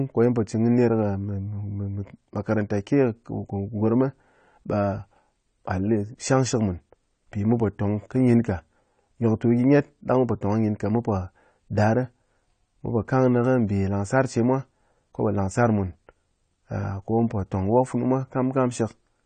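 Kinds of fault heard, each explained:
AAC compression: the speech sounds plainly dull and smeared, with nothing above 9 kHz, likely from AAC-LC coding at a low rate that fits about 32 kbps.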